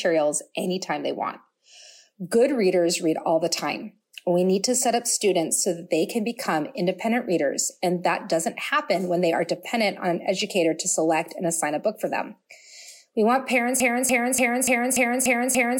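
At 13.80 s the sound locks into a broken-record loop: a 291 ms fragment plays back to back, seven times, right to the end. Most likely the player or stream stalled and kept resending its last fragment, so whatever should have followed is gone.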